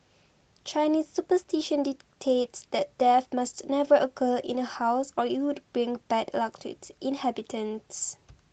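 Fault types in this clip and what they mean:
Nothing here counts as a fault; the speech just carries the usual character of a call, with the top end stopping around 8 kHz as a wideband call codec would leave it.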